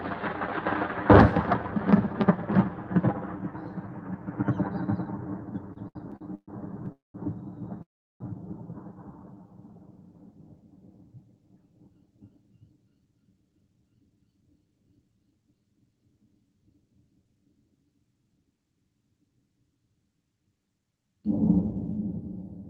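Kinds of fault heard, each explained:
Repeated stalls (stutter): Packets kept reaching the receiver late, so its jitter buffer drained five times between 5.73 and 6.50 s. At each gap the receiver stretched out the last bit of sound until fresh data came. Those fills add up to 282 ms, with the longest 130 ms, more than a third of that stretch. Nothing is lost, but the sound hitches and drags in quick, uneven jerks.
Call audio freeze: Packets were likely held up in transit, leaving the jitter buffer empty. The receiver briefly carried on the last sound, let it die away, and then waited. At 6.92 s a 220 ms hole opens, mostly silent for 160 ms. At 7.82 s a longer 381 ms hole follows, 360 ms of it silent. Each time the audio picks up where it stopped, running later than before.
Jitter buffer slow-down: With its reserve running thin, the jitter buffer rebuilt it by repeating tiny slices of the waveform many times over. 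From 9.05 to 9.48 s this adds 71 ms, so the sound plays at about 85% speed. The pitch stays the same, but the sounds are drawn out, as if the passage were lingering.
Jitter buffer speed-up: Later the buffer held more audio than it wanted, so the receiver trimmed small slices out in quick succession to cut the delay. From 11.21 to 13.90 s the sound runs at about 110% speed, losing roughly a third of a second overall. The pitch does not change, but the passage feels hurried and its timing slightly compressed, with events arriving a touch sooner than they naturally should.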